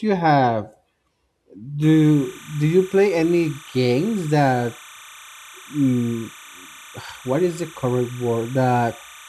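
From 1.82 s to the end, timecode bleed leaks in well below the speech: a chirping warble around 1 and 2 kHz, consistent with 30 fps linear timecode.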